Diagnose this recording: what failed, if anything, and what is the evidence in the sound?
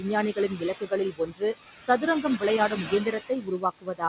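The failure is in call processing: the noise suppressor is clamping down too hard. Throughout the clip, noise suppressor artifacts are audible. The room noise, which sits about 10 dB under the speech, is pulled down by about 15 dB in the gaps and swells back under each phrase. On a spectrogram, the noise floor looks blotchy and pulses with the speech.

The same stage also produces speech cut by the noise suppressor. The suppressor mistakes quieter parts of the speech for noise and turns them down along with the background. This happens at 0.33 to 0.63 s, 0.79 to 0.92 s, 1.11 to 1.55 s, and from 2.69 s to the end. The drops reach about 15 to 19 dB in the first three spans, which are roughly 150, 100 and 200 ms long in total, and about 21 dB in the last. There the sound is swallowed and faint. In the waveform, the envelope sags. On the spectrogram, speech harmonics and soft consonant energy fade into dark holes, all under the 4 kHz ceiling of the G.711 path.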